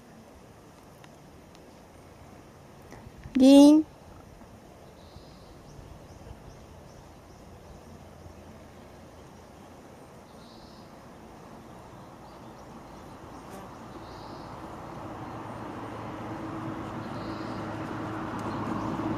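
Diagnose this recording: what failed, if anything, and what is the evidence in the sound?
Nothing in the signal chain has failed: the audio holds a continuous, stable signal throughout, with no break, distortion or other technical damage to be heard anywhere in it.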